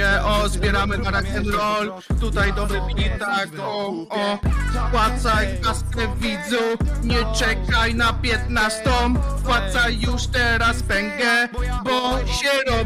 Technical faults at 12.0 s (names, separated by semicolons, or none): one channel drops out